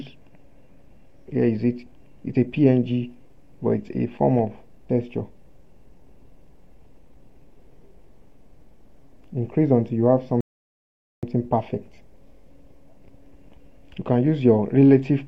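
A rebuffering stall interrupts the audio at 10.41 s: the sound drops to silence for about 0.82 s, until 11.23 s, then picks up exactly where it left off. The player ran dry of downloaded data and waited for more, so nothing's missing, just delayed.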